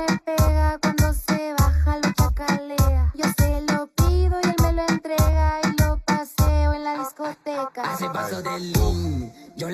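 Channel delay (comb filtering) runs through the whole clip. One channel lags the other by a fraction of a millisecond. When they sum to mono, cancellation cuts fixed notches, the first near 3 kHz. The sound turns hollow and phasey, with dulled upper detail.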